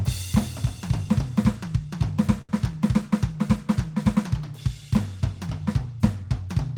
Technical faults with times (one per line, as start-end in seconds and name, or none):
2.41-2.50 short stall from a late packet